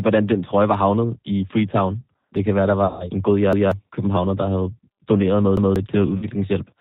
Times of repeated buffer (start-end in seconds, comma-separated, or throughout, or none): 3.53-3.72, 5.57-5.76